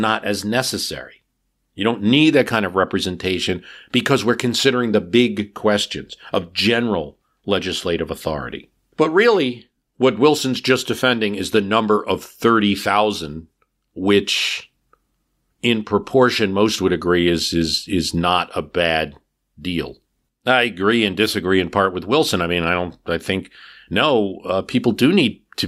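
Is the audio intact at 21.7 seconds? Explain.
Yes, at 21.7 seconds the speech plays through intact, with no dropout, click, distortion or other fault at that moment.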